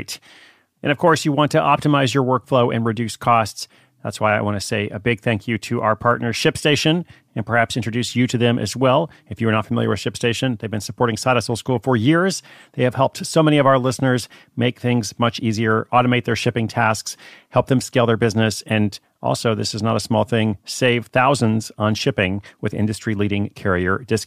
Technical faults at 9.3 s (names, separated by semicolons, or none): none